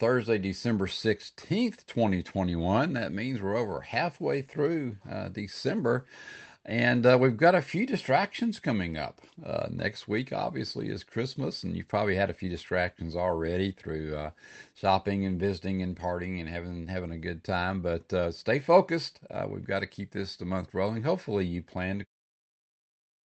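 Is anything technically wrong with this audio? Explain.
No, nothing technically wrong here.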